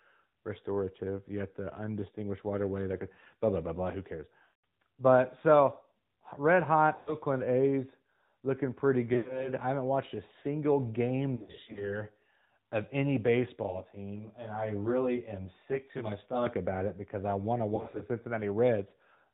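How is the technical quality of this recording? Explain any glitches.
The quality is rough throughout. This is speech squeezed through a phone link, with several dropouts and one stretch that sounds rough and slightly doubled.

The whole clip carries the AMR narrowband mobile codec sound. It's clearly audible: nothing above 4 kHz, and a buzzy, slightly synthetic edge on the voice. That's the codec rebuilding speech from a vocal-tract model fed by a handful of pulses per subframe. The level of damage fits one of the higher AMR-NB modes, around 10.2 kbps.

Lost AMR speech frames show up five times. Around 4.44 to 4.53 s there's a run roughly 200 ms long. Right after "so red", 6.96 to 7.16 s loses about 100 ms. From 9.14 to 9.50 s and from 11.36 to 12.04 s the losses are scattered, with short runs of up to 80 ms. After "because I want to", 17.76 to 18.04 s has brief gaps. In each one the decoder smears the last good pitch and spectrum forward with falling gain. 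You hear a warble or a drawn-out fade, and then the voice comes back a bit weak and rough.

From 13.63 to 16.46 s, between "of any" and "about it because I", there's channel delay (comb filtering). One channel lags the other by roughly 20 ms, and summing them cancels closely spaced frequencies starting down near 30 Hz. That leaves the voice rough and slightly doubled.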